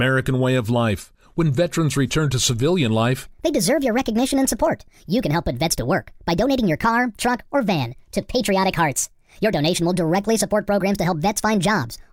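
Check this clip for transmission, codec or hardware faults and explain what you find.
One fault is present: a section at the wrong speed. From 3.26 s to the end, the speech plays 1.47 times too fast, likely from a clock mismatch. Pitch rises about seven semitones and the delivery sounds hurried. A spectrogram shows harmonics stepping upward at 3.26 s, and the waveform's syllables compress.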